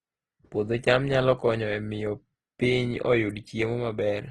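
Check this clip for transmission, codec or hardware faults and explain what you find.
Throughout the speech, the sound is rough and grainy, with plainly audible codec damage and nothing above 12.4 kHz. This is likely Opus compression in its CELT music mode: short of bits, it fills bands with folded or noisy content, which points to about 16 kbps.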